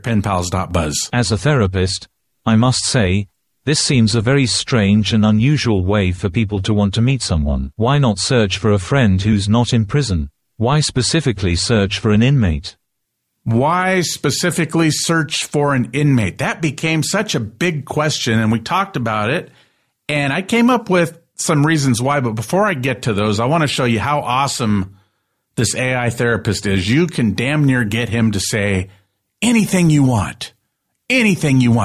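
No technical faults are audible.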